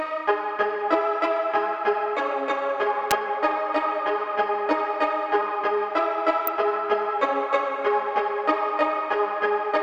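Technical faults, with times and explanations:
3.11 s and 6.47 s: electrical switching spike. Two sharp snaps sit on top of the sound, the first peaking at around -5 dBFS, the second quieter at around -10 dBFS. Each is a near-instant impulse, likely a nearby switch arcing and coupling into the audio line.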